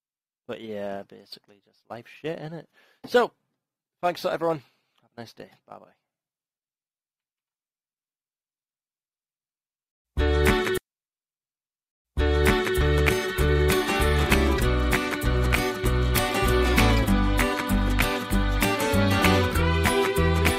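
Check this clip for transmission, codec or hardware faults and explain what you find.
One transmission fault turns up: a stream segment repeated. At 10.77 s the audio jumps back with a brief blip at the seam, and the preceding stretch plays through a second time until 12.77 s, so two seconds of material are heard twice and the clip runs that much longer than it should. The cause is on the delivery side: the player fetched or queued the same two-second segment twice and stitched the duplicate straight into the stream.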